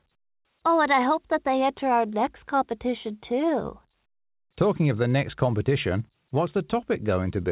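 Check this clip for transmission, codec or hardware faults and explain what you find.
Nothing faulty can be heard anywhere in this speech.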